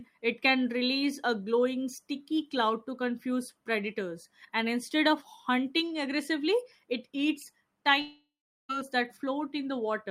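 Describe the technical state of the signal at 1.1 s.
At 1.1 s the speech signal is intact, with no dropout, clipping, distortion or other fault audible at that point.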